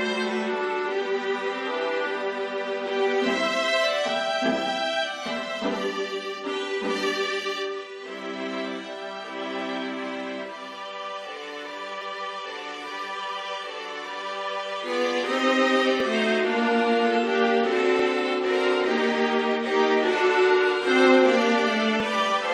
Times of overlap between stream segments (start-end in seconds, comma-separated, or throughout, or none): 12.02, 16.00, 17.99, 22.00